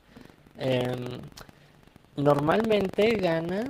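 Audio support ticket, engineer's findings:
Rattling robotic buzz at about 23.4 Hz through whole clip, only while speech present. Buffer tearing: writer and reader crossing each period, fits 2048-sample buffer, small slice of roughly 100 ms old audio.

Brief smear at 2.67 to 2.71 s. Short concealed packet loss: about 20 ms never arrived, decoder extended preceding sound, then blended back into real speech.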